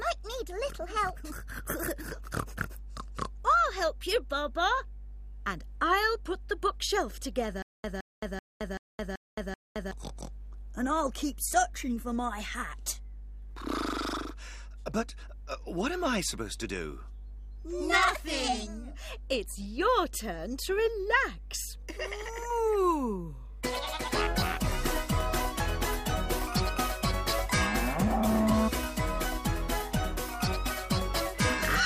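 From start to finish a steady mains hum sits under the audio: a low, constant tone at 50 Hz, fairly prominent at roughly 15 dB below the programme level. It comes from power-line current leaking into the signal path, typically through a ground loop or a nearby transformer. On a spectrogram it appears as an unbroken horizontal line at 50 Hz, with fainter lines at its low harmonics, running the full width of the display.

Between 7.62 and 9.91 s the audio breaks into a stutter with silent gaps. A 166 ms fragment plays, then 218 ms of dead silence, and the same fragment returns six times at an even 383 ms period. The likely cause is a playback or stream stall: each retry replayed the last buffered piece and then ran dry, so the material for that stretch is lost. The waveform shows identical blocks separated by flat, silent gaps, and the spectrogram shows repeated copies of one pattern with clean vertical edges.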